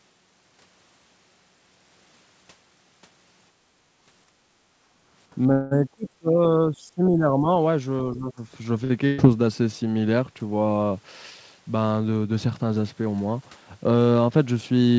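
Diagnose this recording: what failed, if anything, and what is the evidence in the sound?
The room tone dips by about 10 dB from 4.27 to 4.41 s. This is background gated by the echo canceller in the call processing stage, which ducked the microphone while the far end played.

The talker's speech sinks by roughly 20 dB between 5.35 and 7.48 s, and by roughly 10 dB from 8.04 to 8.41 s. The likely cause is speech suppressed in double talk by the echo canceller.

From 5.52 to 5.79 s the sound hangs and fades for about 190 ms, then carries on without loss. This is a call audio freeze, likely from packets delayed on the network until the jitter buffer emptied.

A sound is held too long around 8.84 to 8.92 s, about 50 ms of stretching. This is a short stall from a late packet that briefly starved the jitter buffer.

At 9.06 to 9.2 s the last sound is held and turned down, and the speech then resumes further on, with about 120 ms gone. 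This is a burst of packet loss on the network, concealed by the receiver.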